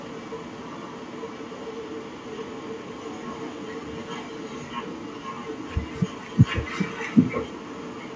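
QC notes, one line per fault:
Throughout, echo leak: a delayed second copy of the speech trails the direct sound by about 0.78 s, sitting well below it at roughly 15 dB down. The likely cause is a far end playing the call on a loudspeaker whose echo canceller let part of its microphone pickup return. Unlike room reverberation, this is a distinct, separated repeat after a clear gap rather than a smooth decaying tail, and it shares the call path's band, which stops at 8 kHz.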